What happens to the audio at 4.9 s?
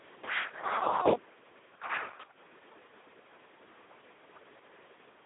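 Speex codec damage at 4.9 s, as across the whole clip: a starved CELP excitation, roughly 2 kbps, leaves the speech hoarse and robotic, band-limited to 250 Hz–3.6 kHz.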